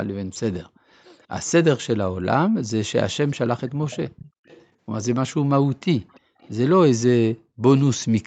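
A delayed second copy of the speech, trailing it by about 0.35 s, surfaces at 0.75–0.79, 1.05–1.26, 3.9–4.66, 6.13–6.2 and 6.4–6.5 s. This is an echo leak, likely from a far-end loudspeaker whose echo canceller let part of the signal through. It sits some 35 to 40 dB below the speech, except at 3.9–4.66 s, where it rises to around 20 dB below. On a spectrogram, repeated harmonic traces appear offset by 0.35 s, ending at 8 kHz like the rest of the call audio.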